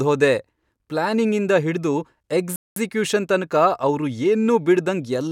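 At 2.56 s the speech drops into a rebuffering stall: about 0.2 s of silence while the player waits for data, then it resumes cleanly on "ತನಕ ಅವ್ರು" with nothing skipped.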